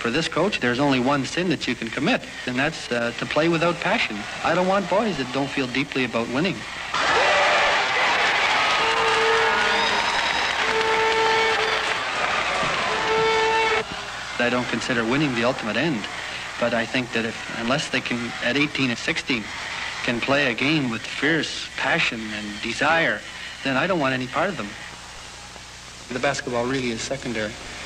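At 7.75 s the sound cross-fades over about 0.3 s into a noisier version with a hiss roughly 40 dB below the signal, with no change in level, and at 12.21 s it fades back to the cleaner sound. This is digital radio blending to analogue: the hybrid receiver lost its digital signal and blended to the FM broadcast of the same station, then returned to digital once reception recovered.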